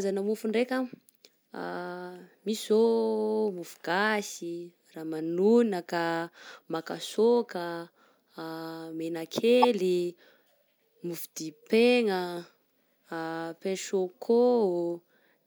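A corrupt frame decoded at 9.62 to 9.65 s in the speech: damaged bits in a single frame misplace energy, producing a brief, loud glitch with an error peak around -5 dBFS.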